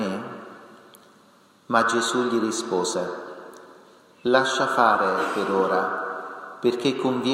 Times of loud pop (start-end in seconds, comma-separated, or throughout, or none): none